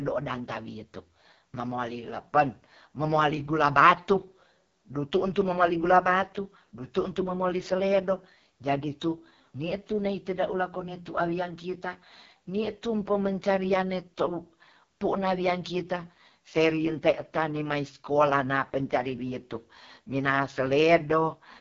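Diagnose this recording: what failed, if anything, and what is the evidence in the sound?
The failure is at the codec stage: AMR wideband (HD Voice) coding, running through the whole speech clip. The speech sounds rough and raspy throughout, which fits the codec's lowest 6.6 kbit/s mode, where the pulse-driven vocal tract model is starved of bits. On a spectrogram there is a hard ceiling near 7.2 kHz, a smeared noise-like band from 6.4 kHz upward instead of real harmonics, and blurred, grainy harmonic structure below.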